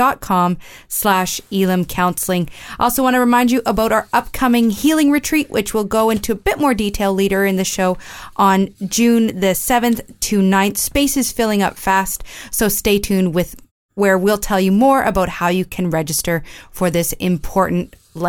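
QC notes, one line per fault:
Nothing to flag on this speech clip; the background just dips to quiet in the pauses and comes back in time for the next sound, which is how it's meant to behave.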